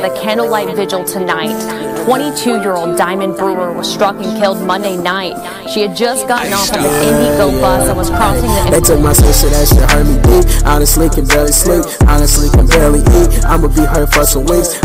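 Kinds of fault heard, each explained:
Hard clipping: somewhere in the chain the signal was driven about 13 dB past what a converter or number format could hold, so every peak that crossed the limit was sliced off flat. Roughly 7 percent of the audio sits against that ceiling for the whole clip. The squared-off tops generate strong upper harmonics, so instead of occasional crackle the louder passages carry a constant harsh, gritty fuzz layered over the sound.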